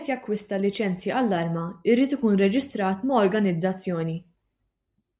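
No technical faults can be heard anywhere in the recording.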